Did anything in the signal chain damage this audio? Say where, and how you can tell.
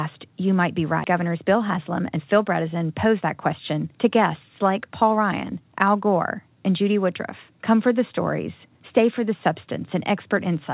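Yes. At the jitter buffer, a skip ahead occurred between 1.04 and 1.06 s. The receiver discarded roughly a second of queued audio, apparently after an overflow, and resumed from material already waiting instead of concealing the gap. Nothing was filled in, so the sound on either side of the cut is spliced almost directly. You hear an abrupt forward jump with no pause, and the continuity of the speech breaks mid-flow.

Right after that, from 1.14 to 5.68 s, there is a jitter buffer speed-up. The buffer was still holding more than its target delay, so it repeatedly trimmed short, pitch-period-sized pieces to drain the excess, removing around 0.4 s in total. Playback runs at about 109% speed while the pitch stays the same, so the speech sounds slightly rushed and clipped in rhythm. The G.711 A-law call path itself ends everything at 4 kHz.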